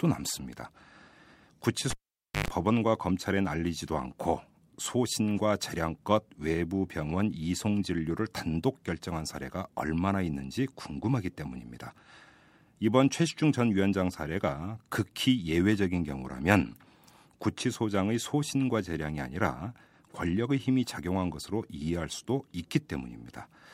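A live cable is pulled and plugged in again from 1.91 to 2.48 s: a pop cuts the speech to near silence for about 525 ms, then a 50 Hz mains buzz lasts about 110 ms while the tip makes partial contact, before a second pop restores the sound.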